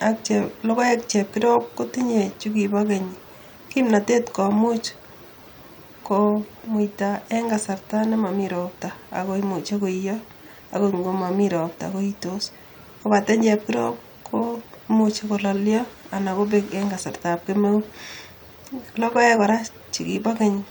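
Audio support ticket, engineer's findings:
No audible fault found on review of this speech recording.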